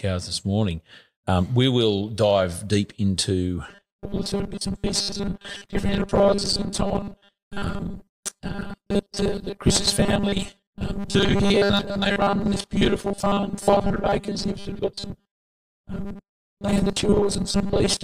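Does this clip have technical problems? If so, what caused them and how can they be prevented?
Yes. Robotic sound from repeated short buffers runs from 3.69 s to 18.04 s: a fixed 200 Hz metallic buzz, likely from a 5 ms block replayed whenever new audio arrived late, skipping most real audio. A larger jitter buffer and steadier delivery prevent it.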